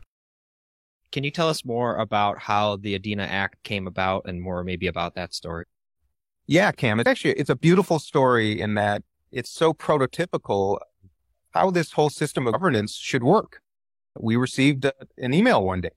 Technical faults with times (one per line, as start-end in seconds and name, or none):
5.58-5.64 compressed frames skipped
7.02-7.06 compressed frames skipped
12.50-12.55 compressed frames skipped